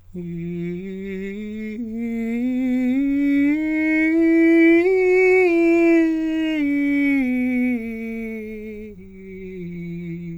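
The music carries no audible technical faults anywhere in the recording.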